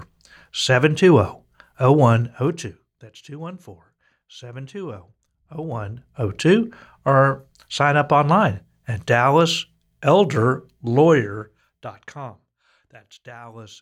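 Zipper noise occurs at 2.05–3.16 s, 5.46–6.32 s and 11.09–12.54 s. The speech level falls, rises, then falls by roughly 20–25 dB in unsmoothed 1–2 dB steps about ten times a second. Each step clicks, making a ticking. The waveform envelope forms a staircase, and the spectrogram shows faint vertical lines.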